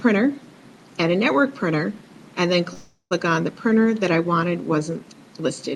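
At 2.73 s, a call audio freeze, likely from delayed packets draining the jitter buffer. The last sound is carried on as a fading buzz or hiss, including about 70 ms of silence. At 3.13 s the audio resumes where it stopped, nothing lost but now 374 ms late.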